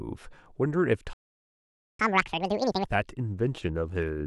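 At 1.13 s the speech cuts out completely and stays silent until 1.99 s, a gap of about 0.86 s. This playback stall points to the player likely running dry of buffered data or having its output thread held up, so nothing reached the output.

From 1.99 s to 2.85 s the audio resumes in a catch-up at higher speed. It runs at twice normal rate, with pitch raised by roughly ten semitones, as the player resamples its backlog to recover the lost time before settling back to normal.

From 3.12 s to the end of the clip the treble turns dull and a gritty, grainy noise sits on the speech. This is a Bluetooth SBC bit pool drop. It fits the bit pool being halved from 28 to 14, around 108 kbps, which starves the upper sub-bands and coarsens quantisation in the rest.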